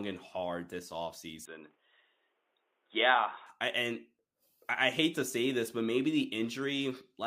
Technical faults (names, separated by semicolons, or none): input switched to a poorer device